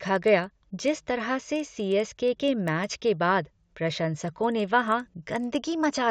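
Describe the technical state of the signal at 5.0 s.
At 5.0 s, as across the whole clip, the resampler restarted on every block: each 40 ms block was converted from 16 kHz to 48 kHz in isolation, leaving an error at every edge. The speech carries a faint tick train at 25 Hz under the voice.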